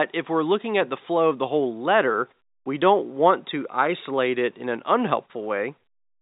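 No technical faults occur in this speech clip, so there is nothing to describe in time order.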